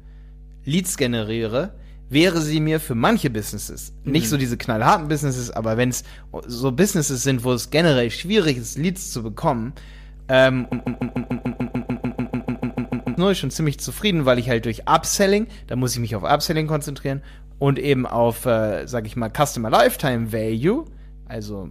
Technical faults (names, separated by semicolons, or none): mains hum; broken-record loop